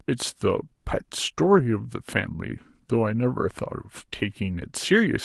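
From 1.37 to 1.59 s, a lost packet rebuilt from error correction: about 120 ms, consistent with six 20 ms packets, plays back from lower-bitrate Opus copies, so the speech sounds rougher and noisier. Unlike plain concealment, there is no gap, fade or smeared repetition.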